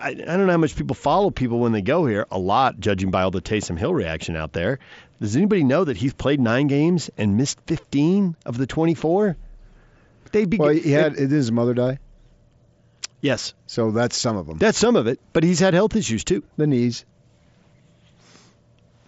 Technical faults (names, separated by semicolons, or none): none